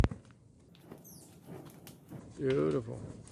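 From 0.69 to 2.19 s, a wrong sample rate plays the sound 1.45 times fast and about 6.5 semitones sharp, fitting 22 kHz material run at 32 kHz; the spectrogram shifts upward and compresses.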